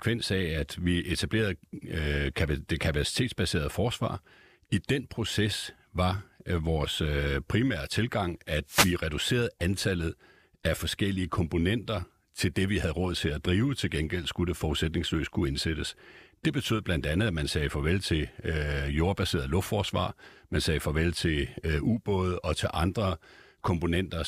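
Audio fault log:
8.66–8.96 s, wireless microphone noise hit: after "øh primære tilgang at", the FM radio link fades and receiver noise swells into a static swish, seen as a broadband spectrogram smear.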